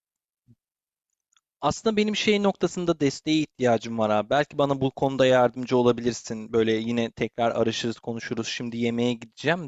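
Speech recording with no audible technical faults.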